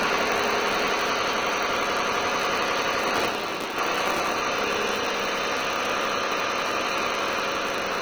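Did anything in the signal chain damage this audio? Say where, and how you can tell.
Yes. Vorbis compression, throughout: the treble sounds hissy and grainy, with smeared attacks. This heavy damage is likely from a Vorbis codec stage at a low bitrate near 20 kbps, quantising fine detail into noise.

A filter restarted on every block, also throughout, adds a steady 188 Hz buzz whose loudness tracks the signal level. That rate fits a 256-sample buffer. Each block starts the filter from silence, so every boundary produces a small transient.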